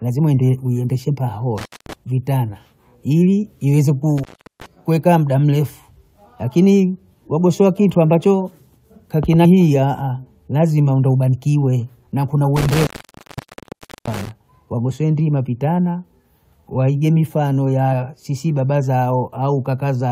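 At 1.58 to 1.93 s the speech cuts out with a crackle at each edge, leaving only faint hiss for about 218 ms before "vitana ili ieze". This is an intermittent contact: a loose plug or cable briefly breaking the signal path.

The same crackling dropout returns at 4.18 to 4.66 s, between "vitana ili ieze" and "kuekaa muda mrefu akini", this time open for about 380 ms.

At 9.44 s the speech jumps forward. Compressed frames were skipped here, roughly five of them at 23.2 ms each, so about a tenth of a second of audio is missing.

A smaller jump of the same kind comes at 11.32 s, with roughly two frames, or about 50 ms, missing.

From 12.56 to 14.31 s the intermittent contact opens again for about 1.22 s, its longest break. The speech drops to a thin hiss framed by crackles.

At 17.92 s one more brief skip, about one frame long, falls between "waige mifano" and "sisi baba".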